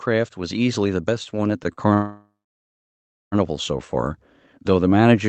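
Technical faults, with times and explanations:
0.05–5.29 s, automatic gain rising: the gain control judges the input too quiet and keeps raising its gain, so voice and background swell together gradually.
1.73–1.81 s, short stall from a late packet: a packet arrives late, the jitter buffer empties, and the receiver holds the last sound about 48 ms before continuing unchanged.
1.94–3.35 s, call audio freeze: the held sound fades to about a second of silence, likely from delayed packets draining the jitter buffer, then resumes where it stopped, nothing lost.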